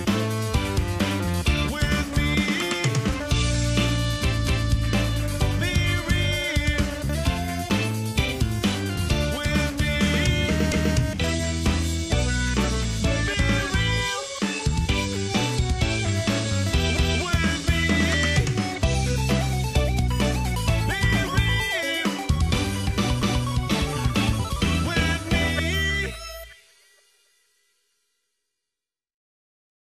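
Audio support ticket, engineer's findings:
Overlapping chunks at 4.47, 10.72, 16.97 and 23.22 s. A 250 ms piece of audio plays twice at each join, heard as a click or stutter. Chunker or streaming buffer is the probable component: each 6 s chunk starts 250 ms before the previous one ends.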